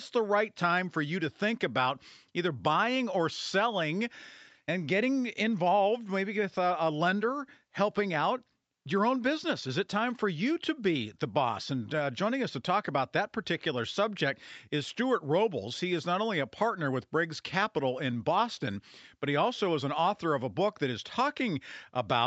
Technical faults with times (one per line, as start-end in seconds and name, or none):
none